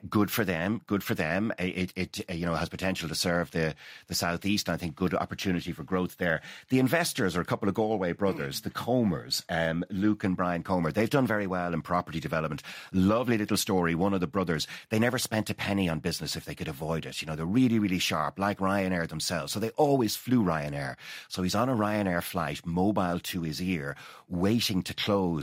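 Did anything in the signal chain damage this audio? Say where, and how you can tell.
No, nothing in the chain seems to have damaged this speech recording, so there's no stage to point to and nothing to flag.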